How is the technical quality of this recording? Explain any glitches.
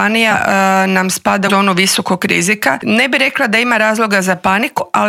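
The recording has three dropouts where compressed frames were skipped, at 0.30–0.34 s, 1.47–1.51 s and 4.76–4.80 s. Whole blocks of encoded audio never reach the output, so playback jumps ahead, losing roughly 70 ms, 150 ms and 100 ms respectively. At each join the sound abruptly resumes slightly further along.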